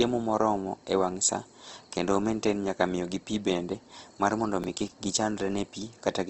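Opus compression, throughout the speech: the sound is grainy and rough with nothing above 8.2 kHz, likely from low-rate Opus music-mode coding near 16 kbps filling bands with noise.

Processor overload crackle, 4.62 to 4.96 s: about ten short buffers, likely around 5 ms each, were dropped across this stretch, leaving hard-edged gaps heard as a gritty crackling tear.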